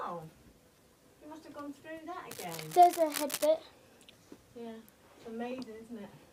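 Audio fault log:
2.31–3.47 s, cable scratch noise: a worn cable or connector was likely moved, its contact resistance jumping erratically, laying dense scratchy bursts roughly 10 dB below the sound.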